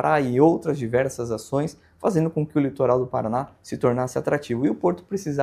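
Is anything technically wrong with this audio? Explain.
No, nothing technically wrong can be heard in this audio; the signal stays steady and intact throughout, with no faults present.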